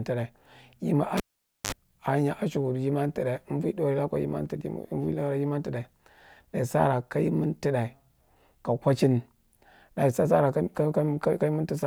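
Speech with a cable pulled and plugged in from 1.17 to 1.72 s: a pop, about 0.5 s of near silence, a 52 ms burst of 50 Hz mains buzz as the plug tip touches, and a second pop. The buzz and pops set it apart from a plain dropout.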